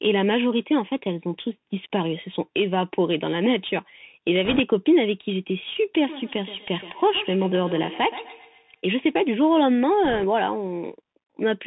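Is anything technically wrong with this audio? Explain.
Yes, there are three faults. Throughout, the speech carries the sound of the Bluetooth CVSD headset codec. Nothing reaches above 4 kHz, a granular hiss sits under the speech, and s sounds turn scratchy. The encoder sends only one up-or-down bit per sample, which fits CVSD's 64 kHz scheme, so fast, loud high content outruns its adapting step size. Unlike wideband codec smearing, the damage is a constant grainy texture tied to signal level.

From 4.45 to 4.60 s and again from 10.05 to 10.24 s there are bit errors on a Bluetooth voice link. The first burst has a few percent of bits flipped and the second somewhat fewer. Because each CVSD bit carries equal small weight and its effect decays, the errors come through as a brief rushing crackle rather than loud clicks or dropouts. This is what separates them from packet loss.

From 6.06 to 8.82 s there is feedback echo between two devices. 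A second device on the same call replays the audio, and the first device's microphone picks it up again. The speech returns at a fixed interval of about 150 ms, peaking about 15 dB below the direct sound. Each repeat is thinner and more ringing than the last. Ordinary room reverberation would be a smooth decay, not these evenly spaced repeats.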